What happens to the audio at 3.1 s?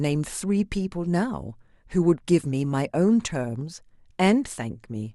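DAB burbling runs from 3.05 to 3.22 s. Bit errors slip past error correction, so wrong samples put short blips of noise into single sub-bands over the speech.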